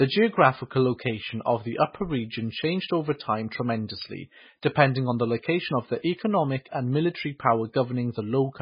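MP3 compression damage runs throughout the speech, most likely from encoding at a very low bitrate, around 16 kbps. Starved of bits, the encoder has removed everything above about 5.1 kHz and dropped weak frequency lines frame by frame, leaving heavy watery swirling, dulled s sounds and smeared consonant attacks.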